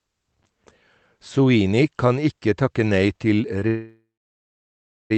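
At 3.59 to 3.63 s there is a short stall from a late packet. One packet missed its playout time, the jitter buffer ran dry, and the receiver stretched the last sound by about 20 ms before picking up exactly where it left off. Nothing is lost; a sound just lingers a beat too long with a faint buzz or dip. On a spectrogram the harmonics run flat and smeared for a sliver of time, and the waveform shows a brief repeated-looking stretch.

From 3.67 to 5.12 s the call audio freezes, most likely because packets were held up in transit and the buffer emptied again. The receiver extended the last sound as a fading buzz or hiss, then went nearly silent for about a second, so roughly 1.4 s of gap was inserted before the stream resumed with nothing dropped. A spectrogram shows a smeared, decaying band collapsing into a near-empty stretch, and the waveform flattens close to zero. Throughout, the Opus call path holds content below about 8 kHz.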